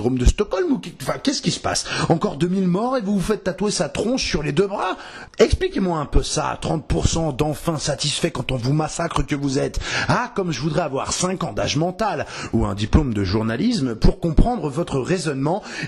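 No technical fault can be heard anywhere in the audio. Nothing in the sound points to a problem in how it was captured, processed or delivered.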